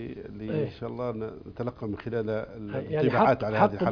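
Nothing here goes wrong, so there's nothing to point to anywhere along the way.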